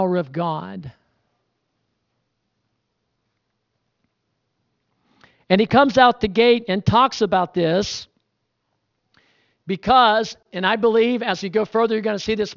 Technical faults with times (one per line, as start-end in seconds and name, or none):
0.00-12.57 aliasing